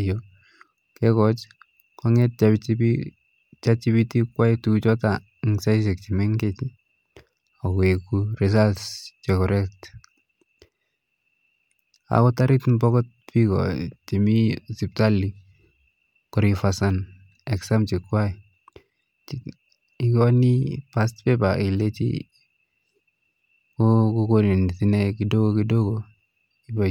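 Speech, with nothing technically wrong with it.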